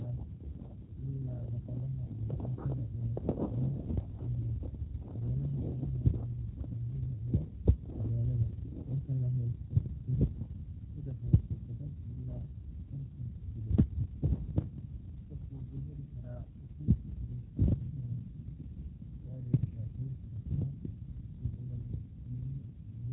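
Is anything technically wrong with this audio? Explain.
Yes. Throughout, the speech sounds plainly rough and slightly synthetic, with nothing above about 3.9 kHz. This is G.729 codec damage: each short frame is rebuilt from a vocal tract filter, a pitch predictor and a few pulses, which fits 8 kbit/s G.729A.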